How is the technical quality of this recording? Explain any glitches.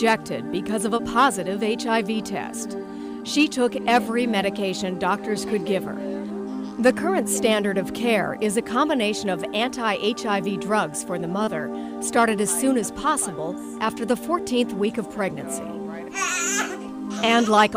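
Two brief dropouts mar the recording, both short concealed packet loss. The first runs from 0.97 to 1.01 s, the second from 11.45 to 11.49 s. Each time, about 20 ms of audio never arrived in time to be decoded. The receiver patched the gap by extending the preceding sound, then blended back into the real signal. The patches last about 13 ms and 23 ms. Each one comes across as a quick smear or wobble.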